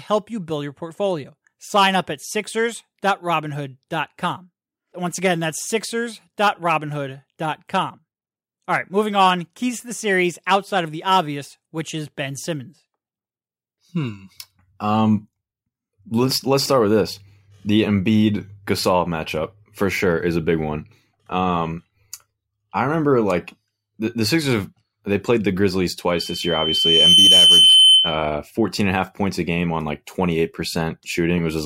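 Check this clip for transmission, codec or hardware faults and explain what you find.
One fault is present: a loudspeaker feedback squeal. From 26.10 to 28.31 s, a 3.1 kHz tone swells within about a second to roughly 10 dB above the speech. The microphone is picking up its own loudspeaker, so the loop gain exceeds unity at that frequency.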